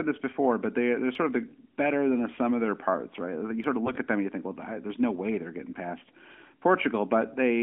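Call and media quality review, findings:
Audio missing between chunks at 1.15 s, 3.64 s and 6.13 s. Brief skips, each around 10 ms, with the two sides butted together and no silence between them. The spacing is a steady 2.5 s, which points to a recorder or processor working in 2.5 s chunks that likely drops a sliver each time it closes one block and opens the next. Repeating pattern, not random loss.

AMR bit errors at 3.84–3.98 s. Speech turns hoarse, scratchy and gargly for about 0.14 s while keeping roughly its pitch and level. This fits around seven 20 ms frames hit at a bit error rate of about 5% on a weak link. The weakly protected bits were flipped while the checksum on the core bits still passed, so the excitation pulses land misplaced and the pitch, gain and spectral detail come out skewed. Heard through the AMR-NB 12.2 kbps narrowband path, band roughly 250 Hz to 3.4 kHz.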